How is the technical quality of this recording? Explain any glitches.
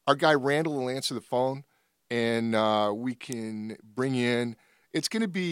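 At 3.32 s, just after "phone and uh we", the speech carries one glitch: a sharp snap, an electrical switching spike, over in about a millisecond. It sounds as a brief click laid on top of the speech rather than a gap in it. Its level is moderate, somewhere around 15 dB below the loudest possible sample. The likely cause is a nearby switch, motor or static discharge arcing and being picked up by the audio line.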